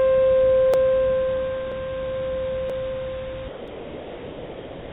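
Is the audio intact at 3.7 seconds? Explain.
No. From 3.48 s to the end, the sender's voice detector likely treated the ongoing sound as background and stopped transmitting. The receiver then filled the gap with comfort noise in place of the real signal. This is sound dropped by the voice detector: the audio gives way to a flat, steady hiss for almost one and a half seconds and never returns. That hiss is band-limited like the rest of the G.711 call audio, with nothing above 4 kHz.

Inside that span, at 3.68 s, there is also audio missing between chunks. The recording or processing appears to run in 1-second chunks, and a short piece, roughly 20 ms, was lost at a chunk boundary, probably as one chunk closed and the next opened. The two sides are butted together with no silence in between, so the fault is heard as a small skip or discontinuity in the comfort noise.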